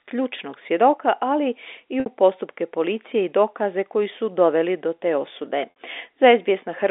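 At 2.00 s to 2.06 s and again at 5.70 s to 5.73 s, packet loss with pitch repetition breaks the speech. Each gap covers about 60 ms of lost audio, which fits three 20 ms packets. The receiver fills it by looping the last pitch period, so the sound briefly holds as a buzzy, frozen tone. On a spectrogram this shows as flat, evenly spaced harmonic stripes. In the waveform, one cycle repeats and fades out before the real signal resumes, all within the narrow telephone band of the G.711 line.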